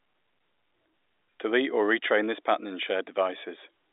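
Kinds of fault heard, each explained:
No kind of fault is heard in this speech clip.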